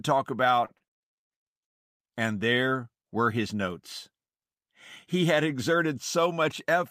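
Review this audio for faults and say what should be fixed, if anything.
Repeated stalls (stutter) run from 0.65 to 1.19 s. Packets arrived late or too slowly, so the jitter buffer emptied five times. The receiver stretched the last sound across gaps of up to 51 ms, about 172 ms in total and roughly a third of that stretch. No speech is lost, but the delivery drags and stutters. A larger or better-adapting jitter buffer would absorb this rate variation.

A call audio freeze runs from 1.64 to 2.02 s. The speech stops and about 360 ms of silence follows before it resumes exactly where it left off. Nothing is lost, but the stream now plays roughly 362 ms later than before. The likely cause is packets held up in transit until the jitter buffer ran dry and the receiver filled the wait. Reducing delay spikes on the network path, for example by prioritising voice traffic, would prevent it.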